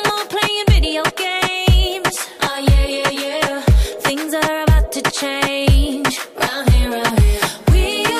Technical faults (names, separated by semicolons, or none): none